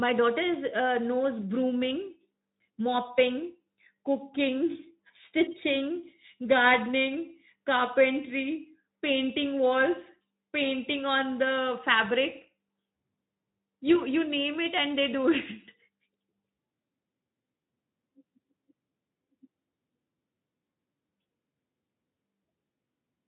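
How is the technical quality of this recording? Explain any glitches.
There are no glitches or faults anywhere in this speech recording. It has come through the Speex codec, with the band stopping at about 3.8 kHz and the light coding texture you would expect at a setting around 15 kbps.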